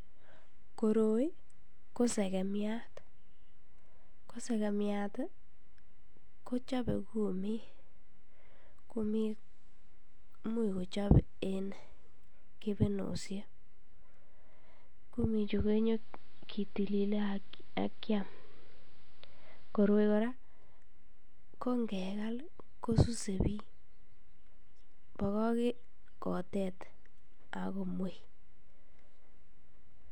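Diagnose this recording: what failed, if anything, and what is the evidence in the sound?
Receiver digital radio blending to analogue, 15.2 to 20.4 s: lost digital signal cross-fades over 0.31 s to AM, level shifting about 4 dB, low hiss.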